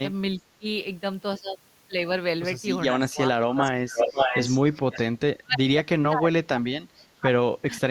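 Speech suppressed in double talk comes first at 0.36 to 0.65 s, with the audio briefly ducking by about 20 dB, likely because the echo canceller clamped down while both ends talked. It returns harder at 2.93 to 3.64 s, dipping by about 30 dB.

Echo leak overlaps that second dip at 3.51 to 3.71 s. It's a scrap of the voice trailing 542 ms behind at about 10 dB down, likely loudspeaker sound the far end's canceller didn't fully remove. A short suppression at 3.8 to 3.97 s follows. Then the echo comes back at 3.95 to 5.02 s, now about as loud as the speech itself. The longest suppression runs 5.22 to 7.31 s, with drops as deep as about 35 dB.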